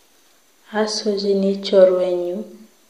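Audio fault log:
No audible faults detected.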